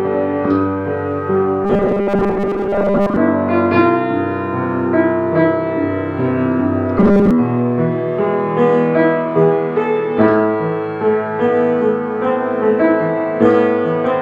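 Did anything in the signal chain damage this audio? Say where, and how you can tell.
Yes. From 1.65 to 3.16 s and 6.98 to 7.31 s, the sound turns into a rigid robotic buzz at 200 Hz. This is likely repeated short buffers at the driver or buffer stage: a 5 ms block replays while most real audio is skipped. On a spectrogram this shows as steady 200 Hz harmonic lines, and on the waveform as identical 5 ms cycles.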